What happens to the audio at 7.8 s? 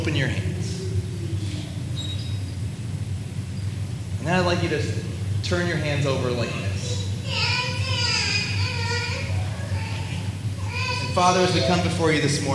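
Nothing goes wrong at 7.8 s: the audio runs on intact through that moment, with no dropout, click or other fault.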